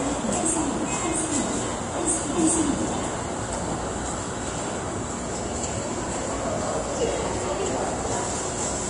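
The sound was most likely squeezed through heavy Vorbis compression from start to finish, at a data rate that fits roughly 32 kbps. At that rate the encoder discards everything above 10.6 kHz and quantises the upper residue so coarsely that fine treble detail is swapped for noise of similar energy. The result is a dull top end with a hissy, grainy sheen over it, tonal parts sound roughened, and sharp onsets come through smeared rather than crisp.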